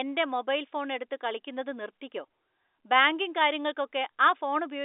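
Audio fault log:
Nothing stood out on listening, with the speech carried over G.711 telephone coding, so the sound stays in the narrow telephone band and has nothing above 3.8 kHz.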